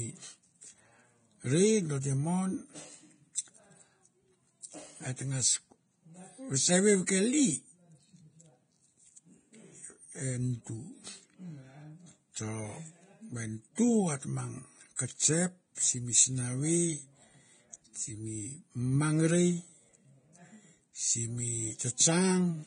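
Throughout the speech there is likely Vorbis compression at heavy damage: nothing passes above 9.7 kHz, and the remaining treble is coarsely quantised into hiss and grain. Tones sound rough and attacks blurred, which points to a low bitrate around 24 kbps.

Pre-echo occurs at 13.75–13.78 s just before "t mang kesep simi", at 14.96–14.99 s between "t mang" and "kesep simi", and at 15.75–15.77 s after "t mang kesep". Block-spread quantisation noise leaks ahead of each sharp onset as a 23–32 ms hiss, softening the attack.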